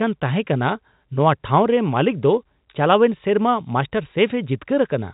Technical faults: none

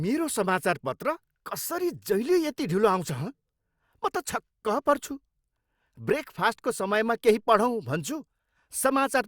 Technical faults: none

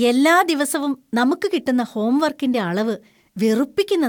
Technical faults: corrupt frame decoded

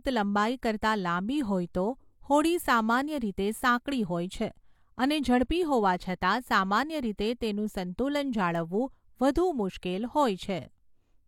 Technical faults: pre-echo

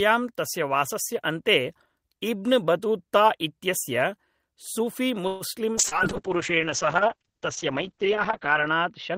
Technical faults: call audio freeze; call bitrate drop; short concealed packet loss; jitter buffer slow-down

